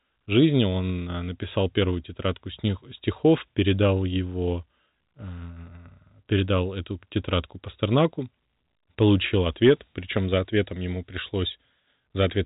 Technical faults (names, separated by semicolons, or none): none